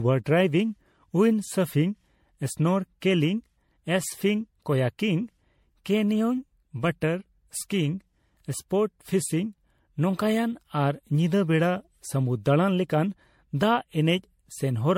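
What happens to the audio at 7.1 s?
Generation loss runs through the whole clip, including 7.1 s: the speech sounds swirly, smeared and hollow, with blurred attacks and nothing above 16.5 kHz. This is likely from repeated MP3 re-encoding, around seven passes at what sounds like 64 kbit/s, each adding fresh quantisation noise and spectral holes.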